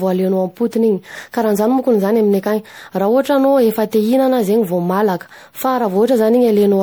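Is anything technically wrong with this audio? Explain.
Yes. Throughout the clip, the speech has generation loss, likely from being decoded and re-encoded as MP3 around seven times, consistent with a 96 kbit/s chain. Each pass requantises on a shifted frame grid, so errors stack up, leaving the speech swirly, hollow and smeared, with blurred consonant attacks.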